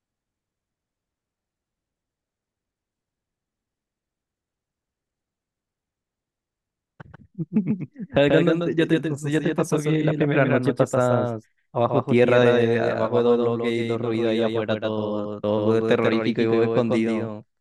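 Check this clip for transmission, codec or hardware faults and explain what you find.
A doubled audio track runs through the whole recording. A second, full-band copy of the speech trails the original by roughly 150 ms at about 5 dB lower, with no decay or room colour. This likely comes from a slower duplicate capture path being mixed in, so every syllable sounds like a dry, evenly spaced slap-back echo.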